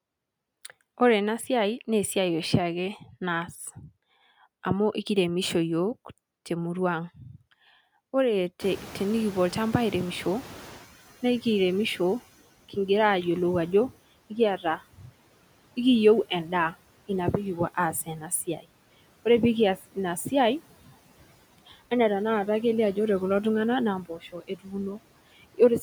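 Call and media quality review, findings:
Noise suppressor artifacts, whole clip: gaps pulled down about 16 dB, leftover background pumps between and under the speech. Suppressor gating bands frame by frame on its noise estimate.

Noise suppressor catching up, 8.6–10.87 s: room noise jumps about 24 dB near 8.5 s and ends up roughly 19 dB under the speech. It leaks through with only about 11 dB of reduction, then settles down over about 2.3 s as the suppressor's noise estimate catches up.

Speech cut by the noise suppressor, five spots: 14.57–15.13 s (about 18 dB deepest), 17.93–18.31 s (about 11 dB), 18.47–18.66 s (about 14 dB), 19.77–19.97 s (about 10 dB), 24.05–24.75 s (about 15 dB). Soft bits sound swallowed, roughly a third of a second at 14.6 and 24.1 s, a brief tenth of a second elsewhere. The suppressor is mistaking quiet speech for background and ducking it along with the noise.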